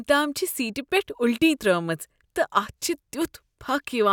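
Nothing in this speech recording stands out as a technical fault, so there's nothing to point to here.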